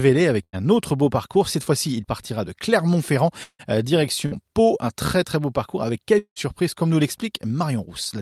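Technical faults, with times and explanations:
0.43 to 0.58 s and 4.26 to 4.43 s, burst of packet loss. The first ends just before "autre beau". Each time a short run of speech failed to arrive. The receiver stretched the last sound for about 95 ms, then about 53 ms, fading it as it went. That is why it turns into a brief held buzz or hiss. Speech then resumes with about 60 ms skipped each time.
1.36 to 2.05 s, jitter buffer speed-up. It runs from "autre beau" to just before "partira de". The receiver was holding more audio than it needed. To catch up, it trimmed tiny pitch-period slices many times in a row, about 50 ms in all. The speech plays at roughly 105 percent speed with unchanged pitch. It sounds slightly rushed.
3.44 to 3.76 s and 6.18 to 6.39 s, long network dropout, likely caused by the connection stalling. The second sits between "très beau parcours avec" and "comme nous". The last sound is continued as a fading buzz or hiss, for about 154 ms and then about 177 ms. 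Silence follows, about 60 ms and then about 80 ms. Speech returns with roughly 120 ms and then 180 ms lost.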